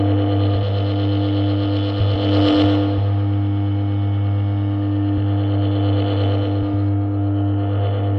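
From 6.89 s to the end, the top of the sound turns hollow and dulled, with a fixed notch near 7 kHz. That is channel delay (comb filtering): one channel lags by about four samples, about 0.07 ms, and summing to mono cancels shared content at evenly spaced frequencies.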